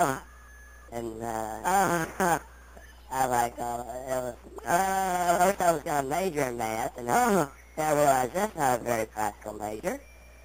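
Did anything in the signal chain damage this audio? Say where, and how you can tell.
No, nothing in the chain from capture through playback left any audible mark on this audio.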